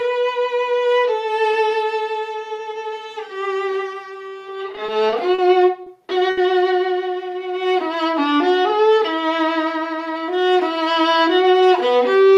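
From 4.75 to 5.40 s the audio shows repeated stalls (stutter). Packets kept arriving late, so the jitter buffer ran dry four times, and the receiver extended the last sound to fill 90 ms in total. The longest gap is 40 ms, and about 14% of that stretch is concealed. Nothing is lost, but the flow halts and restarts several times. Those repeated hitches, none longer than 40 ms, are what set it apart from a single late-packet stall.

Two short stalls from a late packet follow, at 5.82 to 5.88 s and at 6.30 to 6.39 s. Each time one packet was missing when due, so the receiver held the last sound, for 40 ms and then 70 ms, before picking up exactly where it left off. The playout delay grows by the same amounts. Each stall is one isolated held sound, possibly with a faint buzz or dip. It is not a run of hitches, and it does not slow the audio evenly.

From 7.04 to 7.60 s comes a jitter buffer slow-down. 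The buffer needed to build up a reserve, so the receiver repeated tiny pitch-period-sized pieces many times over, adding 60 ms. The audio plays at about 90% speed with its pitch unchanged, so sounds are drawn out smoothly, perhaps with a slight warble. Unlike a stall, the stretching is spread across the whole span and nothing freezes.

Between 9.56 and 10.38 s there is a jitter buffer speed-up, the reverse case. The buffer held more audio than it aims for, so the receiver cut out short pitch-period pieces, about 70 ms in all. The audio runs at about 108% speed with the pitch unchanged and sounds hurried. That steady compression without any pause separates it from the stalls and from the slow-down.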